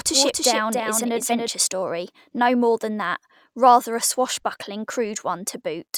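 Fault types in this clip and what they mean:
Doubled audio track: the speech is already running with a second copy of itself trailing roughly a third of a second behind, a few dB quieter than the original, clean and full-band with no room tail. It's there from the very start and cuts out abruptly at 1.48 s, just before "story no more than". A second capture path running late, or two misaligned copies left in an edit, is the likely cause.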